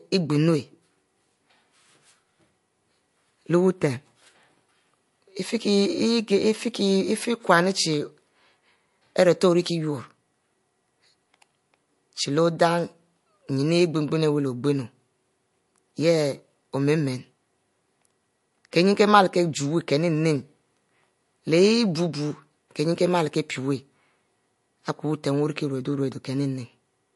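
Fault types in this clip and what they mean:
MP3 compression: the speech sounds watery and swirly with smeared attacks and nothing above about 11.3 kHz, likely from a low-bitrate encode around 48 kbps.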